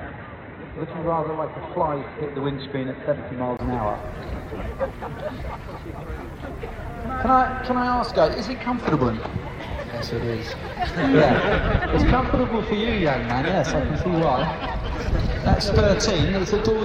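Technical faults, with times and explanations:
0.00 to 3.59 s, input switched to a poorer device: the opening sounds dull and boxy, with nothing above 4 kHz, then clears up abruptly after a 20 ms silence at 3.59 s. The loudness stays about the same across the change, and the dull section carries its own low background noise, far below the signal. The likely cause is the input running on a lower-grade device or a headset call profile before the system moved to the proper microphone.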